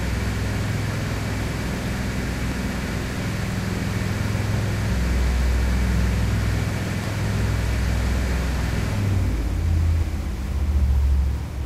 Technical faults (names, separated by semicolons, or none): compressed frames skipped